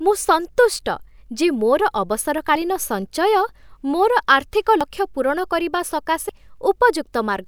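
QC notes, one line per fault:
2.55 s, 4.81 s, 6.29 s, dropped buffer (overrun): each is a sudden forward jump in the speech, no gap. At 4.81 s it falls between "ମୋର ଆର୍ଥିକ" and "ଲକ୍ଷ୍ୟ ପୂରଣ କରିବା", and at 6.29 s it comes just after "ଆର୍ଥିକ ଲକ୍ଷ୍ୟ ପୂରଣ କରିବା". The skips grow from a very short slice to several hundredths of a second. This is likely because the software read its samples too late, so the overwritten audio vanished and its edges were spliced.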